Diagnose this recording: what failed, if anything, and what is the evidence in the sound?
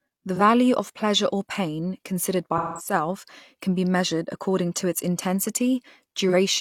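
AAC frame loss with concealment, at the codec stage. There are smeared, phasey patches at 0.35 to 0.41 s and 6.28 to 6.34 s, each about 43 ms, which fits a single lost frame. A longer smeared stretch runs from 2.57 to 2.93 s and points to several consecutive frames. The decoder patched these gaps from the last good spectrum.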